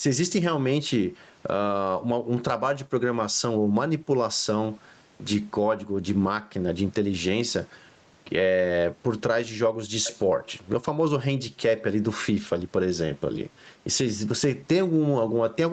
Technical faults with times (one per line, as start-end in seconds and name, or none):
0.00-15.72 gain pumping